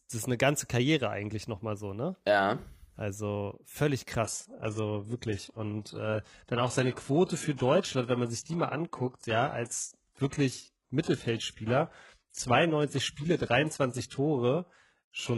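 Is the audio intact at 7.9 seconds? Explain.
No. From 4.24 s to the end, the speech turns dull, with nothing above 11.5 kHz. This is an adaptive stream at a lower bitrate, which fits a drop to a far smaller codec rate.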